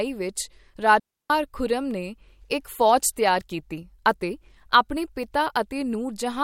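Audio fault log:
1.00 to 1.30 s, digital wireless dropout. The speech cuts out into a clean hole of near silence lasting about 304 ms, then resumes. There is no crackle, hiss or burst of noise on either side of the gap. That clean edge is the mark of a digital radio link. The receiver lost too much data to rebuild the signal, so it muted the output with a very fast fade and waited for the link to recover.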